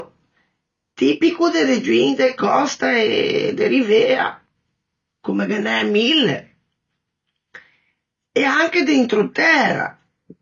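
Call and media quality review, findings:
AAC compression, throughout. Likely an AAC-LC encoder starved of bits, consistent with about 24 kbps. Cut-off lowered to 6.9 kHz, nothing above. Coarse quantisation of the remaining bands leaves speech dull and smeared, with fizzy sibilants. Codec damage plainly audible.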